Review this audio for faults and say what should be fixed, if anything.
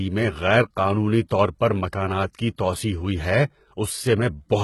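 The speech treble sounds gritty and metallic throughout, with sibilants turning lispy and nothing at all above about 11.8 kHz. This is most likely HE-AAC compression at heavy damage, which fits a very low bitrate of around 16 kbps. The codec spends its bits on the lower spectrum and synthesises the upper band by copying lower bands upward under a coarse envelope. The harmonics above the crossover therefore no longer line up with those below.

At 2.33 s, between "طور پر مکانات" and "کی توسیع ہوئی ہے", a brief hiss of about 16 ms runs ahead of an attack, which itself sounds softened. This is pre-echo. The attack fell late within a transform block, so quantisation noise sized for the loud onset was spread across the whole block. That noise filled the quiet stretch just before it, smearing the onset backward in time.

To prevent both, re-encode from the original source at a substantially higher bitrate with a full-band codec mode, which also lets the encoder switch to short blocks around sharp attacks.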